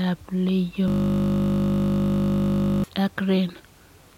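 Speech clip with a system hang loop from 0.88 s to 2.84 s. A single 20 ms slice of audio repeats exactly for nearly two seconds, producing a steady 50 Hz buzz. This points to the system freezing while the sound hardware kept replaying a 20 ms ring buffer.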